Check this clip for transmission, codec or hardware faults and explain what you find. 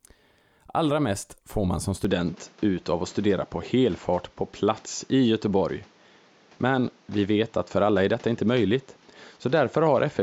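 There's one fault here. Right after "mest får man som", at 2.05 s, the input is likely switched to a poorer device, and it stays that way to the end. Everything above 7.6 kHz disappears, so the speech turns duller, with a faint new background noise well below it. The level barely changes and there's no gap at the switch.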